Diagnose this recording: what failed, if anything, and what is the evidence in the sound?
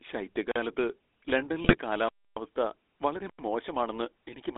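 GSM full-rate codec, throughout the speech: the codec stage leaves a buzzy, gravelly roughness, and the band stops near 300 Hz and 3.6 kHz, which fits a 13 kbps full-rate stream. The codec models the vocal tract and drives it with a coarse pulse excitation.

Block of digital silence, at 0.51 to 0.56 s (about 44 ms) and 2.09 to 2.37 s (about 279 ms): the sound drops to silence and returns with no fade. This points to the driver or buffer stage not refilling the output in time.

GSM bit errors, at 1.64 to 1.77 s: the speech turns briefly to squawks, pops and gargling, pointing to a few corrupted frames. On the radio link, flipped bits corrupted the filter, pitch or gain values, so the decoder rebuilt warped spectra and unstable levels.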